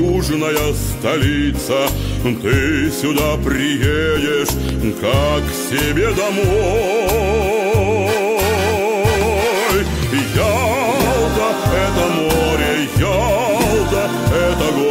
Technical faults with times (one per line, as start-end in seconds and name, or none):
4.69-4.71 loud pop